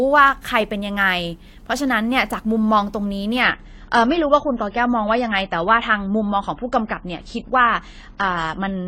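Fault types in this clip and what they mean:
Adaptive stream at a lower bitrate: from 3.42 s to the end the player drops to a leaner version with no gap, leaving nothing above 9.9 kHz.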